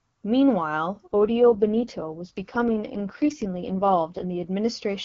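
From 1.06 s to 4.47 s the speech turns rough, raspy and noticeably synthetic, with no gap and no narrowing of the band, then clears again. This is an AMR rate drop. The AMR-WB (HD Voice) link, clean at its normal rate, was told by the network to fall to a much lower rate and put the freed bits into error protection, consistent with a step down from 23.85 to 6.6 kbit/s, one of the two lowest wideband rates.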